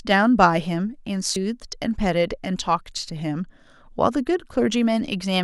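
Damaged data in a compressed stream at 1.33 to 1.36 s: corrupted frames throw the decoder out of sync while it hunts for the next header, leaving a brief glitch in the speech.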